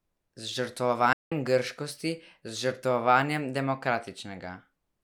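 At 1.13 s the speech cuts out abruptly and stays silent until 1.32 s, a gap of about 183 ms: a playback stall. The likely cause is the player running short of data, or its output thread being blocked, so nothing reached the output until it recovered. It sounds like a sudden hole in mid-flow. A waveform shows a flat line across that span, and a spectrogram shows a clean, empty vertical band with sharp edges.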